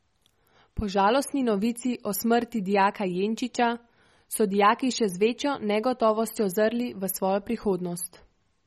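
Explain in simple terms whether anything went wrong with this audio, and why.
The speech was most likely squeezed too hard by MP3 compression, which saves space by discarding detail it judges unimportant. From start to finish nothing remains above 15 kHz, so it sounds dull, and the starved detail flickers, giving a plainly watery, swirly quality.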